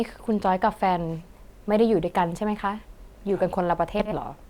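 From 3.99 to 4.16 s, the speech turns into a garbled flutter. This is frames out of order. Two neighbouring blocks, each about 60 ms long, were decoded in swapped order. No time is lost overall.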